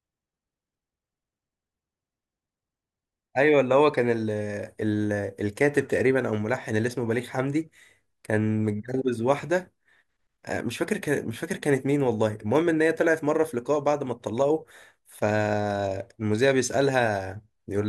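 No technical faults can be heard anywhere in the recording.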